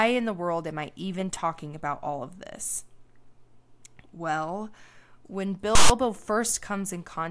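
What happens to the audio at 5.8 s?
From 5.75 to 5.90 s, file tags are played as audio: a block of text tag data is decoded as samples, producing a loud, hard-edged rasp offset to one side.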